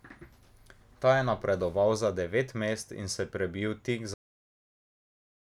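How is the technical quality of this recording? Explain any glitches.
The recording has one clear fault: a cut-off end. At 4.14 s the final buffers were never written, so the speech stops mid-sound and drops straight into digital silence, with no natural decay, until the end.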